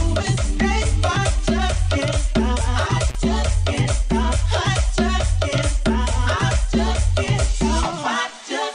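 Intermittent contact at 3.09 to 3.17 s: a loose connection opens for about 34 ms, cutting the sound out with crackle at either edge.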